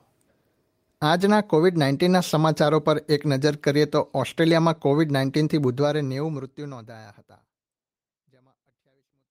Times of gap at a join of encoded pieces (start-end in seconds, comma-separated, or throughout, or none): none